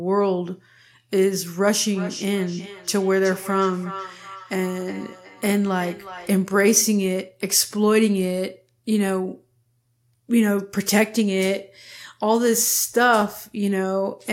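From 1.86 s to 6.44 s the speech comes back as a delayed copy roughly every 0.4 seconds, a hollow, ringing trail behind each phrase that peaks at about 16 dB below the direct speech. This is feedback echo between two devices: a second device in the same room plays back what the first one's microphone sent, that microphone picks it up again, and neither echo canceller removes sound played by the other device.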